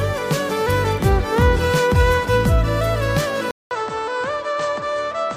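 At 3.51 s the audio drops out for 200 ms. It then returns duller and quieter, about 10 dB down, with nothing above 8.4 kHz and a faint new noise floor. This is likely an input switched to a poorer device, holding to the end.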